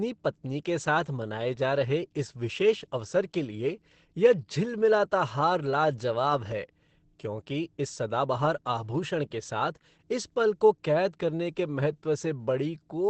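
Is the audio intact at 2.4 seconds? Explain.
No. At 2.4 seconds you're hearing the same damage that runs through the whole clip: heavy Opus compression, likely. The speech sounds muffled and hoarse, and there's essentially nothing above 8.7 kHz. That points to the encoder dropping into its speech-oriented SILK mode at a wideband setting, which fits a low rate somewhere around 12 kbps. At that rate it models the voice coarsely and discards the top of the spectrum.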